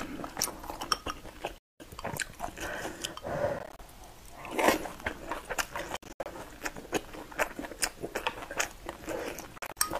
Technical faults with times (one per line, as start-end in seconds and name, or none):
1.58-1.80 Bluetooth dropout
3.59-3.79 Bluetooth dropout
5.97-6.26 Bluetooth dropout
9.58-9.77 Bluetooth dropout